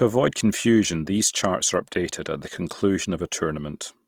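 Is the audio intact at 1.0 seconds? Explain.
No. At 1.0 seconds, as across the whole clip, the speech sounds rough and grainy, with a noisy, fizzy texture where the tonal parts should be smooth. The likely cause is Opus compression in its CELT music mode. The encoder keeps the overall energy in each frequency band, but with too few bits it fills bands with folded copies of lower ones or with noise. The damage is plainly audible and points to a rate around 24 kbps.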